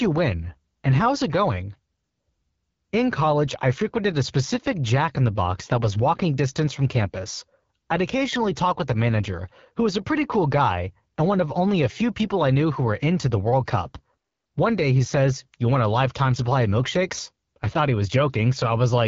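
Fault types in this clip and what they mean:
AMR wideband (HD Voice) codec: speech is model-coded to 6.4 kHz with noise fill above and nothing past 7.3 kHz; the plainly rough, raspy texture fits the low 8.85 kbit/s mode.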